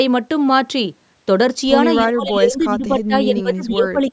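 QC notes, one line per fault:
2.05–3.99 s, speech suppressed in double talk: the speech sags in patches totalling about a second and a half, dropping by up to about 15 dB, likely an echo canceller ducking the talker during overlap. The waveform shows a gouged, shrunken envelope, and the spectrogram shows faded, gappy harmonics.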